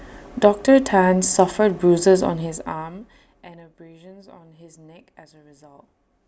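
From 2.16 to 3.64 s, a gain reduction of roughly 25 dB is applied in unsmoothed 2 dB jumps, about ten per second, producing zipper noise. Each jump leaves a small click, so a steady ticking rides on the speech as it drops.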